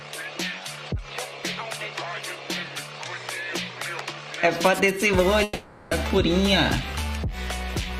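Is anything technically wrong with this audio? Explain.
Yes. From 5.43 to 5.93 s, a long network dropout likely left about 480 ms missing. A fading buzz or hiss fills the gap, showing as smeared, repeating spectral bands on a spectrogram before the sound resumes further on.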